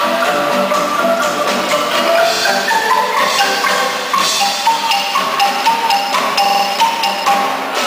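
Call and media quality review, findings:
Repeated buffer at 2.37–2.42 s (one extra play) and 6.46–6.64 s (four extra plays): playback device or driver replaying its last ~46 ms block when fresh audio arrived late, which fits a 2048-sample buffer. Stutter with a hard join at each repeat, no silent gap and nothing audibly lost, unlike a dropout.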